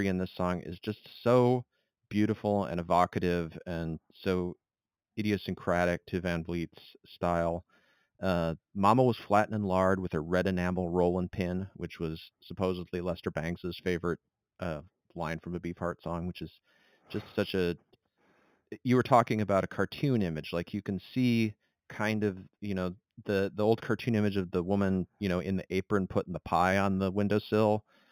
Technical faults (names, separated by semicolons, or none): imaging from linear upsampling